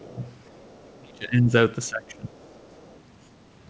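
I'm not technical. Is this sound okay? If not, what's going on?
No. The speech keeps getting pushed down and a faint second voice slips in, most likely because of how the call's echo canceller handled both sides talking at once.

Speech suppressed in double talk: from the start to 0.21 s, from 0.93 to 1.54 s, and from 1.89 to 2.36 s, the talker suddenly drops in volume, most deeply around 1 to 1.5 s. Unlike a bad connection, which chops sound off cleanly, here the voice is turned down while the far side is speaking, because the system likely mistook it for echo.

Other side's voice leaking through: from 0.46 to 0.89 s and from 2.36 to 3.0 s, a very quiet second voice sits underneath. It is the far side playing from the talker's loudspeaker and getting back into the microphone. Unlike background chatter in the room, it follows the call itself and comes and goes right next to the dips. The call's normal coding keeps everything below 8 kHz, which is why the audio sounds a little muffled throughout.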